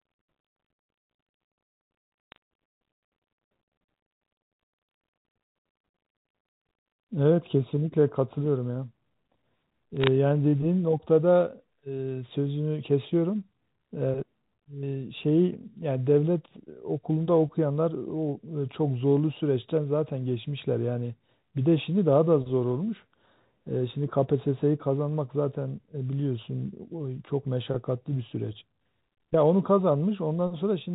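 Bit errors on a digital phone line crackle at 2.32–2.36 s and 9.97–10.07 s. Flipped bits each corrupt single samples, so sharp ticks land on unbroken speech, without packet-loss gaps.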